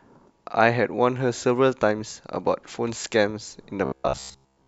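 From about 3.85 s right through to the end, the speech turns into robotic sound from repeated short buffers. There's a stiff, metallic buzz sitting at roughly 67 Hz, which fits a block of about 15 ms being replayed over and over. The likely cause is audio arriving too slowly, so the playback side keeps looping the last chunk for most of that stretch and skips the real material. The rough shape of the speech still comes through underneath.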